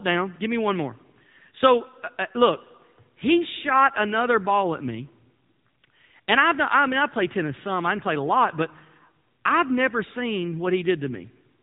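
From start to finish, the speech carries AMR narrowband mobile codec damage, and it is plainly audible. Nothing passes above about 3.8 kHz, so the sound is thin and muffled. The voice turns buzzy and synthetic, which fits a low bitrate near 7.95 kbps.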